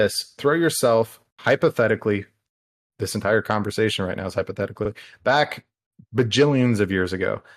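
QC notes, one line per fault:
4.84–4.88 s, repeated frames: right after "conversation right now is" there's a quick stutter where a 42.7 ms slice of audio plays a second time. That length fits a run of about two compressed frames being written or sent twice, so the decoder dutifully plays the same bit again before moving on. You hear it as a tiny hiccup, and the clip runs 42.7 ms longer than it should.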